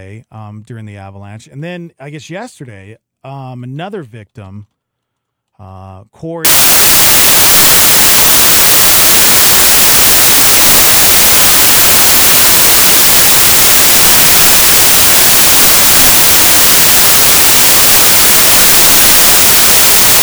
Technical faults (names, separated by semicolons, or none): samples built from the wrong bytes